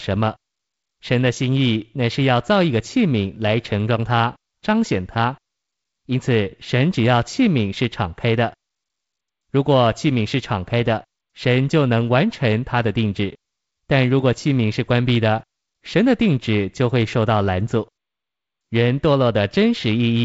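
Speech carried over G.722 wideband telephone coding at 48 kbit/s, its band stopping at about 7.7 kHz as the codec dictates, with no technical fault present.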